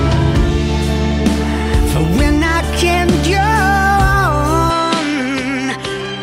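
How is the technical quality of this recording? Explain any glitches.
The recording has one clear glitch, starting at 4.70 s and lasting to the end.

Input switched to a poorer device, from 4.70 s to 6.22 s: the capture likely jumps to a different, lower-grade input partway through. With no gap at the change, the sound abruptly loses everything above 11.4 kHz, dulling its top end, drops by roughly 5 dB, and picks up a new background noise floor sitting around 40 dB beneath the signal, so the final stretch sounds narrower and quieter.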